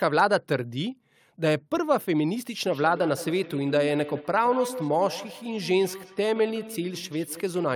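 Feedback echo between two devices runs through this speech from 2.64 s to the end. The sound returns at intervals of roughly 150 ms, peaking about 14 dB below the speech and thinner and more ringing. A second device replays the call, and the first's echo canceller cannot remove it.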